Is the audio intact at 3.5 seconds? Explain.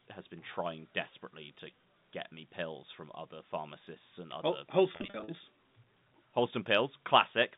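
Yes, the speech at 3.5 seconds is intact, with no dropout, click or distortion, only the narrow telephone band of the G.711 line it was carried over.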